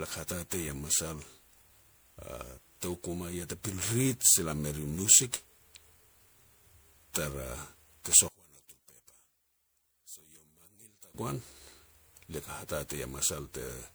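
From the start the speech has a swirly, smeared, hollow quality, with consonant attacks blurred. That is more damage than a single lossy pass would leave, and it fits generation loss from repeated MP3 coding at about 128 kbit/s, likely around seven decode and re-encode cycles. Each pass quantises on a shifted frame grid, so the noise and spectral holes pile up.

Between 8.28 and 11.14 s the voice suddenly drops by about 20 dB when heard in mono and turns into a faint, ghostly remnant, then returns at full level. This is likely one channel inverted. With one side's polarity reversed, the centred voice shared by both channels cancels on summing, leaving only the small difference between them.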